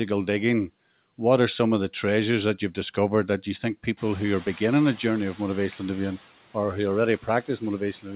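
Speech, band-limited to 4 kHz as a narrowband call codec such as G.711 would leave it, in which the room noise jumps by about 22 dB around 4 s. The noise suppressor catching up passes that noise with less reduction from 3.97 s, then pulls it down by about 6 dB by 6.16 s as its estimate adapts. A spectrogram shows a noise floor appearing and then dimming over roughly 2.2 s.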